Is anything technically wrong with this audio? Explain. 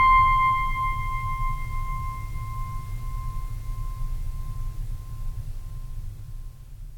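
No, nothing in this music stood out as a technical problem on listening.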